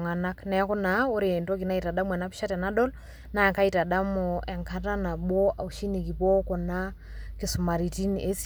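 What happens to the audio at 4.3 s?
Nothing goes wrong at 4.3 s: the speech runs straight through that moment with no dropout, click, glitch or other fault.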